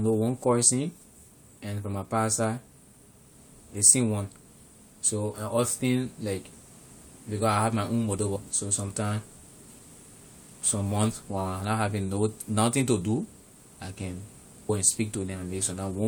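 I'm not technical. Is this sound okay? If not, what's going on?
No. There are two tiny glitches, at about 8.35 s and 14.69 s. Each is a brief chirp or blip in the speech. This is damaged data in a compressed stream. A few bytes of the file were corrupted, so the player briefly misread them.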